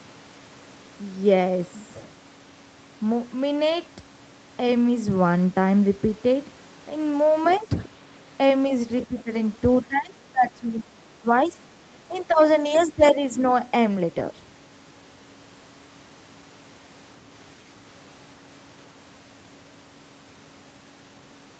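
Speech recorded through a call, where the echo canceller likely let loudspeaker audio from the far end slip into the microphone. Faint scraps of another voice, around 20 dB below the talker, surface at 7.43 to 7.59 s and 9.02 to 9.06 s, with a longer, quieter stretch at about 25 dB down from 12.17 to 13.11 s. That same canceller, faced with both sides talking at once, likely turned the talker down along with the echo. This is speech suppressed in double talk: a slight dip of about 5 dB at 7.59 to 7.7 s, a deeper one of about 15 dB at 9.08 to 9.3 s, and, from 9.85 to 13.23 s, dips reaching about 20 dB. Inside that stretch, lost packets were rebuilt from error correction. The Opus decoder filled the gap from the low-bitrate copies carried in following packets, so no silence occurs, but about 60 ms at 12.65 to 12.75 s sounds rougher and noisier. The call's 8 kHz audio bandwidth offers no upper band to lose there.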